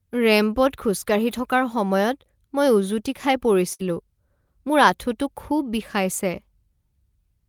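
At 3.73 s the speech breaks for a burst of packet loss lasting until about 3.82 s. Several consecutive packets failed to arrive in time, so the receiver stretched the last sound it had for about 57 ms, fading it down, and then resumed with roughly 60 ms of the speech never heard. Unlike a plain dropout, the gap isn't silent. It is filled by a smeared, dying continuation before the audio jumps ahead.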